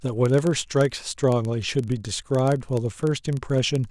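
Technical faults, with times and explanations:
Throughout, block size mismatch (padded): a tiny zero-filled gap ends every block, giving a 23.4 Hz buzz that fits a 1024-sample read block. Playback runs at 0.999 times normal speed, pitch unchanged. The waveform shows evenly spaced dropouts; the spectrogram shows thin vertical stripes.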